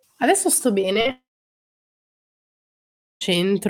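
Three short concealed packet losses hit at 0.81–0.85, 0.93–0.97 and 1.01–1.07 s. Speech data missed the decoder, and the gaps of 20, 20 and 40 ms were filled from the preceding sound. Each is heard as a brief smear or wobble.

From 1.11 s the sound carries on as a fading artificial continuation for about a tenth of a second, then falls silent until 3.23 s. About 2.1 s of speech is missing when it resumes, the likely cause being a long network dropout.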